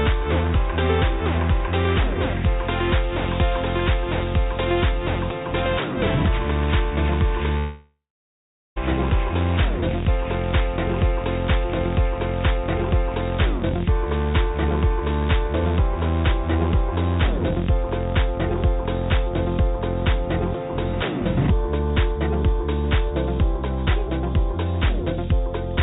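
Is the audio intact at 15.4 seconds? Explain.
Yes, the audio at 15.4 seconds is intact, with no fault at that moment.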